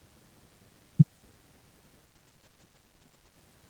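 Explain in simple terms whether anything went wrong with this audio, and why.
A couple of things went wrong. Running under the whole clip is a DECT cordless phone buzz: a nearby cordless handset or base pulses its radio 100 times a second, and the audio circuitry picks that up as a thin, steady buzz, fairly quiet beneath the speech.

Then, from about 2.06 s to 3.43 s, there's a call bitrate drop. The connection briefly squeezed how much data the speech could use, so the encoder got stingier, and for that stretch the speech turns coarser and rougher before recovering near the end.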